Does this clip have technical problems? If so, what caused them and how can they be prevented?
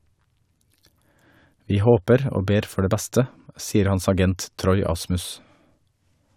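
No, nothing stood out as a technical problem on listening, so there is nothing here that needs a cause or a fix.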